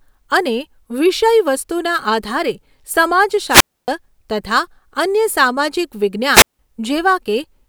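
At 3.48 s the speech hits a wireless microphone squelch dropout lasting until 3.88 s. The FM radio link weakens, a short surge of hiss rises, and then the receiver's squelch cuts the output to near silence for about 277 ms before the voice comes back. The same thing recurs at 6.31 to 6.59 s, with a mute of about 172 ms. Unlike a digital packet dropout, each gap is preceded by climbing static rather than an abrupt clean cut.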